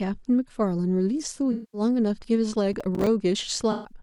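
From 1.52 to 1.81 s, AAC frame loss with concealment replaces about 0.21 s of speech with a smeared, noisy patch rebuilt from the last good spectrum. On a spectrogram it shows as blurred, structureless energy.

Between 2.73 and 3.07 s, processor overload crackle appears as a gritty tearing. Around ten missed deadlines, which fits buffers of about 5 ms, each leave a hard-edged silent gap, seen as thin notches in the waveform.

At 3.71 to 3.92 s, a second AAC frame loss smears about 0.13 s in the same way.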